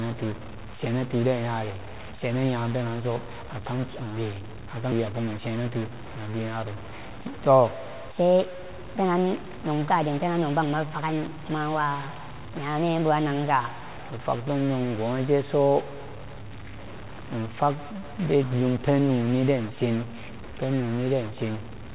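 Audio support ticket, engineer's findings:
Stuck bit: distortion throughout, noise filling pauses. Likely a data bit stuck at one value in converter or line, offsetting about half the samples.

Skip ahead: 4.92–4.94 s, after "penanso akam kiwe". Roughly a second of audio dropped, no fill; the two sides are spliced directly and delay is cut by the same amount.

Jitter buffer speed-up: 5.06–6.07 s, ending before "na dunyaro". Hurried delivery at unchanged pitch, 112% speed; the receiver trimmed pitch-period pieces, about 150 ms total, to drain excess buffering.

Section at the wrong speed: 8.12–13.94 s, ending before "ifag bunen". Played 1.24x fast, pitch up about four semitones; likely resampled or clocked at the wrong rate.

Band-limited to 4 kHz throughout, consistent with the G.711 A-law call path.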